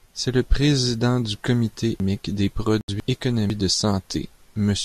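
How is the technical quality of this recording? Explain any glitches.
The technical quality is compromised by two faults in the middle of this speech recording, both between 2.0 and 3.5 s.

Chunks out of order, 2.0 to 3.5 s: The system delivered a 500 ms chunk of audio two chunks late, so it plays after the two chunks that should have followed it. No audio is missing, but the sequence is scrambled. The result is a jumbled stretch of speech lasting 1.5 s, with three hard joins where mismatched segments meet.

Digital broadcast dropout, 2.81 to 2.89 s: The receiver lost the digital signal, or frames failed their integrity check, so it muted output until valid frames resumed. About 72 ms of programme is lost. That length fits a few consecutive frames being discarded. The sound is a brief hole of silence inside the already jumbled section, and the speech resumes afterward without the missing material.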